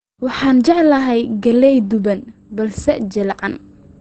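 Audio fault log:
Throughout, Opus compression: the speech is muffled and hoarse, with nothing above 8.3 kHz, and the codec damage is plainly audible. The sound points to Opus running in its SILK speech mode at a low rate, which fits about 16 kbps; this is likely the cause. The band limit plus the hoarse texture mark it apart from MP3, which leaves swirling, watery gaps instead.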